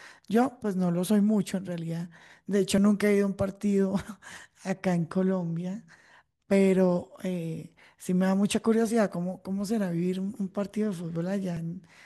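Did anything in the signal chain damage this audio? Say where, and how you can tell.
Yes. At 11.57 s the speech skips forward with no gap, which points to a dropped buffer (overrun) at the driver or buffer stage. The likely cause is the capture software missing a buffer before the hardware overwrote it, losing a few milliseconds and splicing the edges together.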